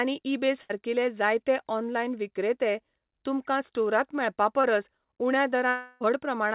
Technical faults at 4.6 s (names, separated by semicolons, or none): short concealed packet loss